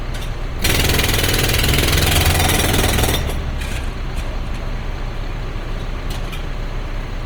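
From start to finish the sound has a grainy, roughened texture, with tonal parts turning noisy rather than clean. That's likely Opus compression in its music (CELT) mode. When the bit budget gets tight, it keeps each band's energy but fills the detail with folded copies or noise. The damage is plainly audible, which fits a stream around 24 kbps. The bandwidth stays full, with content reaching up to about 20.1 kHz, so it's rough rather than muffled.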